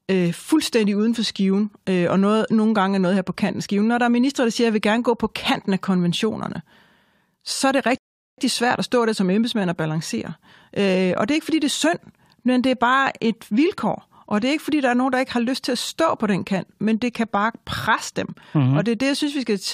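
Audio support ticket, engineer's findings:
Rebuffering stall, 7.98–8.38 s. Playback buffer drained, player halted until more data arrived. Speech cuts to dead silence for about 0.40 s, then resumes exactly where it stopped; nothing missing, just 403.6 ms of added time. Probable component: network delivery feeding the player buffer.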